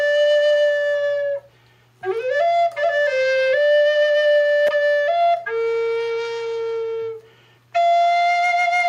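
Gain pumping runs through the whole clip. The gain swings by around 10 dB, likely from excess gain feeding a fast limiter.

At 4.67 s a repeated buffer occurs. A tiny slice replays several times with hard joins, heard as a brief buzz. This fits a 5 ms buffer.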